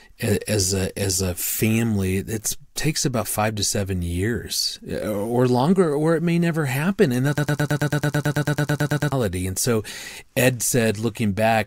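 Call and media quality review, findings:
Broken-record loop, 7.38–9.12 s: likely a stalled player or stream resending its last buffer; a 110 ms fragment repeats 16 times after "may never happen and", audio lost until "and so ed".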